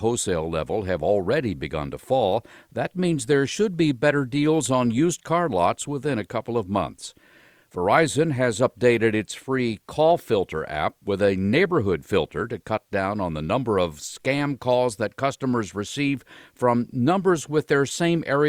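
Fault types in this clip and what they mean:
There are no fault types to list for this clip.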